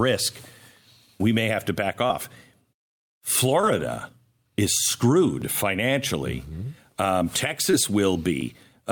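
Around 2.07 to 2.11 s and again at 3.61 to 3.65 s there's short concealed packet loss: about 20 ms of the call arrived too late, and the receiver papered over it by extending the preceding sound for 20 and 15 ms before easing back, so you hear a quick smear.

At 5.42 s there's a tiny skip, most likely audio missing between chunks: a few milliseconds dropped as one roughly 3-second block handed off to the next, with the two edges butted straight together.

At 7.71 to 7.75 s the packet loss returns, with about 21 ms of filled-in sound blurring the moment. Then at 8.41 s, exactly 3 seconds after the first skip, what is likely the same chunk-boundary jump repeats, giving that regular hiccup.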